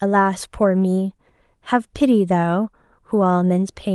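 No technical faults can be heard anywhere in this recording. The speech signal runs on without any break or disturbance.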